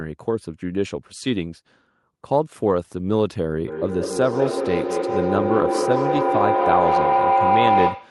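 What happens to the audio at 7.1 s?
At 7.1 s a feedback howl is sounding. It starts at 3.67 s and runs to the end. The microphone-to-loudspeaker loop gains level each trip, narrowing to a tone around 700 Hz. Each trip takes roughly 200 ms, and the howl peaks about 3 dB above the speech.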